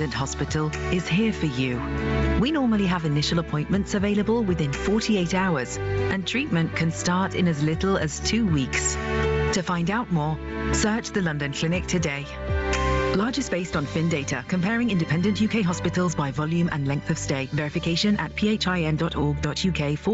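Gain pumping runs through the whole clip, with a gain swing of roughly 15 dB. Loud and soft parts sit close in level. Likely cause: gain set far too high, with a fast limiter clamping it. Nothing is heard above 8 kHz, which fits a call path.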